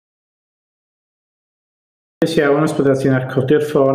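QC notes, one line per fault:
0.00–2.22 s, audio dropout to silence: the clip opens already inside a dead gap of pure silence with no room tone, and sound resumes abruptly at 2.22 s, likely from a lost input or link while recording continued. The waveform is a flat line and the spectrogram is blank.
Throughout, gain pumping: loud and soft parts sit closer in level and the sound is squashed, with level swinging by around 10 dB, likely because the input gain was far too high and a fast limiter kept clamping it. The waveform envelope looks squashed flat.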